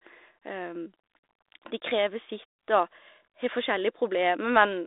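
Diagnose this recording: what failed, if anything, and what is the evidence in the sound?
Nothing in this speech recording has failed at any stage. The audio sits within a telephone band of about 300 Hz to 3.7 kHz and carries only the light, level-following graininess expected of G.726 ADPCM at 32 kbit/s, which is that path working as designed.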